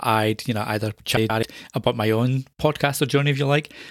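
Right after "I'd you know either", from about 1.17 to 1.43 s, there's a stretch where frames play out of order. Two neighbouring blocks, each about 128 ms, got swapped, so the second half of that quarter-second plays before the first. You hear a garbled, fluttery jumble. Nothing goes missing, and the sound picks back up at "about my own".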